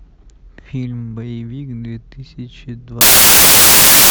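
A speech recording that, from 3.01 s to the end, collapses into loud, harsh broadband noise. These are samples built from the wrong bytes: each value is assembled misaligned or byte-swapped, so its rapidly fluctuating low bits dominate.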